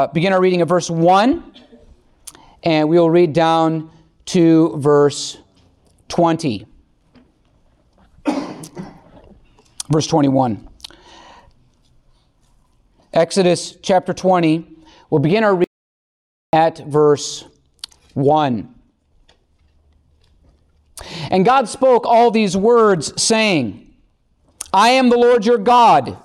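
At 15.64 s the sound cuts off abruptly and is replaced by complete silence, with no room tone underneath, until it resumes mid-flow at 16.53 s. This is an audio dropout to silence lasting about 0.89 s, and whatever occurred in that span is simply missing. The likely cause is a momentary loss of the input signal, such as a disconnect or brief mute, while the recording chain kept writing silence.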